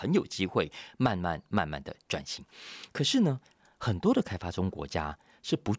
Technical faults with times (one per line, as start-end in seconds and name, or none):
none